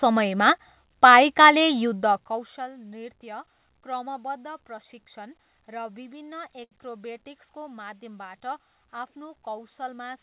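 At 6.64 s, a short stall from a late packet stretches the preceding sound for 73 ms. Nothing is lost, but everything after it is delayed. The spectrogram shows frozen, flat harmonics below the call path's 4 kHz ceiling, and the waveform shows repeating cycles.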